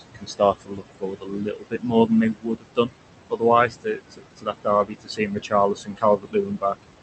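Noise suppressor artifacts run through the whole clip: the suppressor pulls the steady room noise down by about 21 dB between phrases, so it sinks and swells with the speech. Speech cut by the noise suppressor occurs at 0.0–2.11 s, 2.33–2.9 s, 3.3–3.43 s, 3.68–4.67 s, 4.85–5.53 s and 5.74–6.85 s. In each stretch, quieter parts of the speech are treated as noise and dropped by up to about 17 to 22 dB, so soft consonants, word endings or quiet phrases sound swallowed. The first stretch loses the most, roughly a second and a half.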